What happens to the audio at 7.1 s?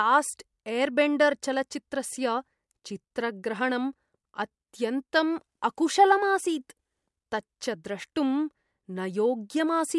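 Nothing goes wrong at 7.1 s: the speech carries on intact, with no dropout, click, distortion or other fault at that moment.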